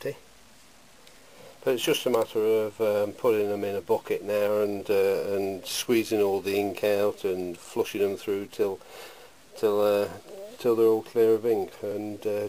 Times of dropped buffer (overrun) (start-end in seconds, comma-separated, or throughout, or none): 8.64, 11.91